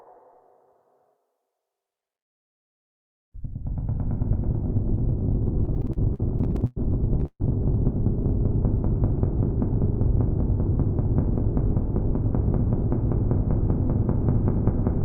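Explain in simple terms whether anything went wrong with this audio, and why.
Between 5.65 and 6.78 s the sound hits repeated stalls (stutter): twelve brief hitches, the longest about 105 ms, fill roughly a quarter of that stretch. Packets arrived late, so the receiver kept stretching the last sound while waiting. Nothing is lost, but it drags.

At 7.25 s a call audio freeze lasts about 0.14 s. The sound holds and fades, with the final 50 ms going silent, then resumes where it stopped, now slightly later. This was likely caused by a brief hold-up of packets in transit.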